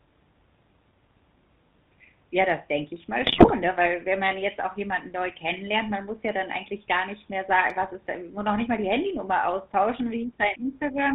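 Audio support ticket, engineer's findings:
GSM full-rate codec throughout. Buzzy, gravelly speech, nothing above 4 kHz. Pulse-driven vocal-tract model, damage plainly audible, fits 13 kbps.

GSM bit errors, 3.22 to 3.52 s. Squawks, pops and gargling. Corrupted filter, pitch and gain values distort frames, pointing to a few percent bit errors.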